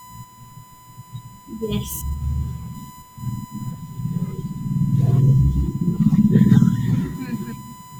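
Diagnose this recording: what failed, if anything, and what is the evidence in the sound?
USB whine runs through the whole speech recording, a steady fixed-pitch tone at 1 kHz sitting roughly 25 dB below the speech. The fault is in the analogue wiring: the USB bus's 1 ms frame current draw is leaking through shared power or ground into the signal path.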